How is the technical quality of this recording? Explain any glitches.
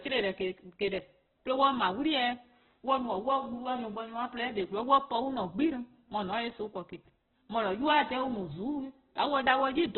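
The quality is poor: heavy compression damage runs through the whole recording. Opus compression, likely at a very low bitrate around 8 kbps in its music mode, leaves narrowband speech with nothing above 4.1 kHz, sounding rough, grainy and noisy. A spectrogram shows a hard ceiling at 4.1 kHz and smeared, noise-filled bands below it.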